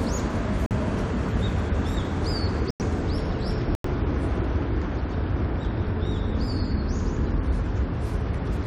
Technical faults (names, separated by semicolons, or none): corrupt frame muted